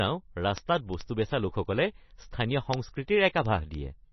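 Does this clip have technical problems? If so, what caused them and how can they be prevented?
Yes. Heavy MP3 compression, likely at a low bitrate around 24 kbps, strips out weak frequency lines and removes everything above 5.9 kHz, leaving the speech watery and dull. Prevent this by recording and delivering in a lossless format, or encoding at a much higher bitrate.

Word clock ticks run from 0.14 s to 4.10 s. A receiving device on its own unlocked clock, drifting by roughly 300 ppm, misreads the digital link and drops or repeats a sample about every 0.07 s. That produces about fifty sharp ticks of uneven strength at a steady rate. Prevent this by locking the receiving device to the sender's clock, or both to a common word clock, before recording.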